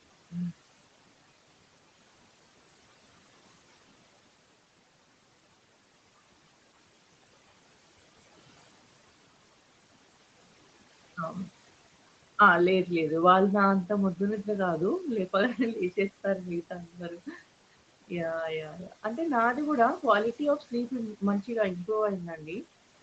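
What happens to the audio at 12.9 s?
At 12.9 s you're hearing noise suppressor artifacts, which run through the whole clip. The suppressor pulls the steady room noise down by about 18 dB in the gaps and lets it rise under the speech, so the background noise sinks between the words and comes back under them.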